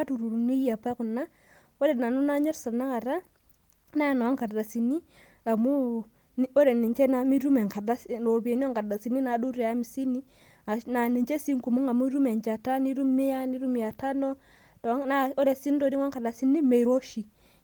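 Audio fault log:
No faults detected in this speech recording.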